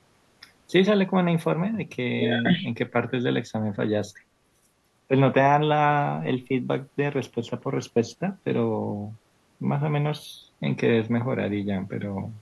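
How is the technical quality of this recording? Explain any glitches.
Nothing technical goes wrong anywhere in the recording, so there are no glitches to explain here.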